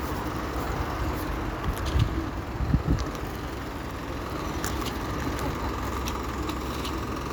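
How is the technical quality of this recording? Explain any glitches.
The recording has no glitches, with the signal holding steady and continuous across the whole clip.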